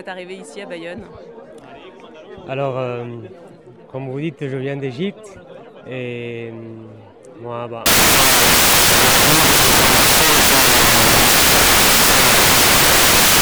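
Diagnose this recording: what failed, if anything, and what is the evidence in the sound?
From 7.86 s to the end, the sound turns into loud broadband hiss. That means samples were built from the wrong bytes at the sample-format conversion stage. Byte misalignment or a swapped byte order pushes the rapidly changing low bits into the most significant position. Unlike clipping or codec damage, the original is buried in noise rather than distorted.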